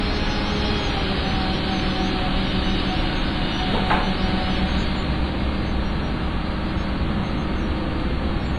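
From start to finish the sound carries heavy transform-codec damage, likely WMA compression at a low bitrate, which fits roughly 24 kbps. Nothing survives above 10.6 kHz, so the top end is dull and closed. Coarse quantisation spreads noise across long blocks, so transients ring and smear over tens of milliseconds, and quieter detail is stripped out. The result is a washy, watery texture with a hiss that swells and fades with the signal.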